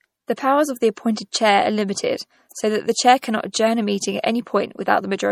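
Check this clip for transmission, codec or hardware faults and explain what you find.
Two codec-related faults are audible in the speech: compression damage throughout and two brief pre-echoes.

Throughout, MP3 compression damage is plainly audible, with a watery, swirly texture and nothing above 19.5 kHz. The likely cause is lossy MP3 encoding at a low bitrate, consistent with about 48 kbps. Starved of bits, the encoder drops weaker frequency lines, which flicker between frames, and cuts the treble.

Pre-echo occurs at 0.36 s, spreading about 12 ms, and again from 2.49 to 2.51 s, spreading about 21 ms. A short hiss precedes each attack, and the attack sounds soft or smeared. The codec spread quantisation noise across its whole block, filling the quiet moment before the sharp onset.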